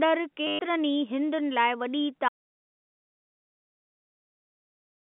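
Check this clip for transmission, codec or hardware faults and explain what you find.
Two faults are present, on a speech signal carried over G.711 A-law telephone coding limited to roughly 200 Hz to 3.5 kHz.

From 0.47 to 0.59 s there is packet loss with the last packet repeated. Over those 120 ms the receiver replayed its most recent packet instead of the missing ones. The loops don't align with the pitch period, so the run buzzes, which fits 10 ms packets and a 100 Hz stutter.

From 2.29 s to the end there is an audio dropout to silence. The signal stops mid-flow and is replaced by silence with no residual room tone. The cause is likely an input loss, such as a disconnected device or failed link, while recording continued.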